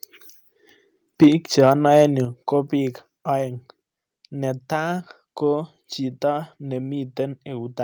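From 1.22 to 1.28 s the peaks are flattened, about 4 dB over the limit, with a harsh crackle. This is microphone overload, likely from input volume set too high. At 1.24 s the level drops about 3 dB in one step. The microphone volume was likely stepped down. Mild overload returns from 1.59 to 2.04 s, about 2 dB over, with few peaks cut. At 2.25 s, before "ko bik oeng", the level falls again, about 6 dB.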